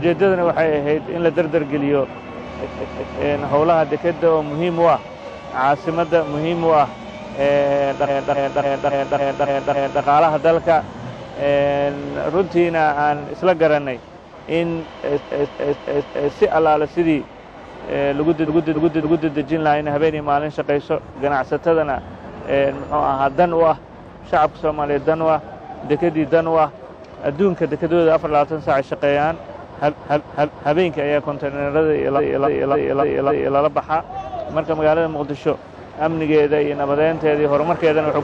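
The audio stutters with repeated frames at 2.63–3.18, 8.06–10.01, 15.17–16.28, 18.46–19.30, 29.89–30.72 and 32.16–33.56 s. Each time, a block of about 186 ms in the first event and 279 ms in the others replays back to back, three to seven extra times. That points to a short run of compressed frames written or sent again, which also lengthens the audio. On a waveform and spectrogram, identical blocks sit side by side in exact copies.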